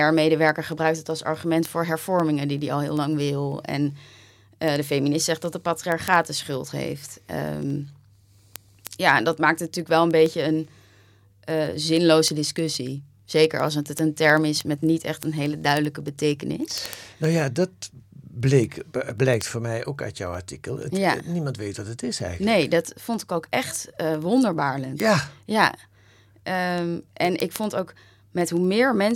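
From 0.10 s to 29.11 s, the speech carries word clock ticks. They come at a steady rate, roughly every 70 ms, so there are several hundred across the clip. The receiving device runs on its own clock instead of locking to the sender's. The two clocks differ by roughly 300 parts per million. Each time they slip past each other, a single sample is dropped or repeated. That slip is heard as a tick.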